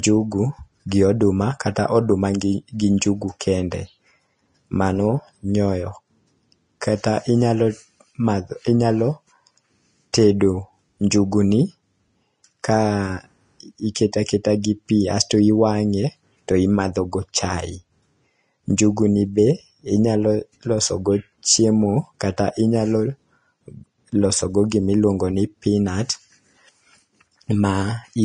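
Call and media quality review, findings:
Whole clip: hissy, grainy speech, plainly audible codec damage, nothing above 10.6 kHz. Likely Vorbis at a rate fitting around 32 kbps, coarse treble quantisation swapping fine detail for noise, lowered cut-off. Worth checking the encoder settings.

Pre-echo at 10.13 s: brief hiss smeared ahead of the attack just before "tedo njugu", spread about 10 ms. Transform codec spreading block quantisation noise from the loud onset into the quiet moment before it.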